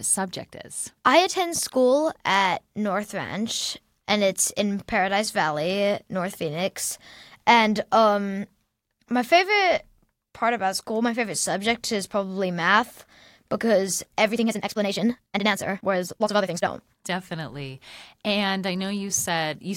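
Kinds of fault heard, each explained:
Time-stretched section: from 14.30 to 16.68 s the speech suddenly runs at about 1.91 times its normal pace while the pitch stays where it was, so this stretch sounds rushed against the rest of the clip. This is likely time-stretching software squeezing the passage to fit a shorter length, keeping the pitch steady by cutting out short pieces of the audio and butting the remaining pieces together, which leaves the rushed delivery heard here.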